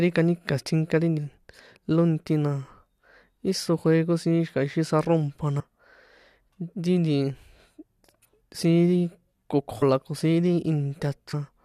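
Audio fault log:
1.17 s, 5.59–5.61 s (after "siín xi̱ka̱ ixi saro̱mpa"), 9.81 s (before "la ko"), 11.33 s: compressed frames skipped. The speech jumps ahead by roughly 200, 100, 150 and 150 ms as whole 21.3 ms frames go unplayed.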